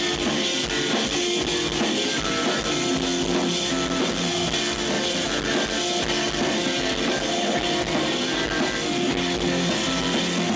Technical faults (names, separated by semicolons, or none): none